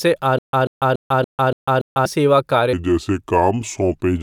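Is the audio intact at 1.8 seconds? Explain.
No. At 1.8 s the speech is inside a stutter with silent gaps, running from 0.39 to 2.06 s. A 139 ms fragment repeats six times, each followed by 147 ms of digital silence, most likely from a stalled stream replaying its last buffer. The missing audio is lost.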